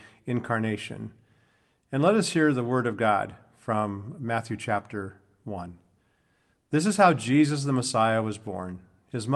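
No technical faults are audible.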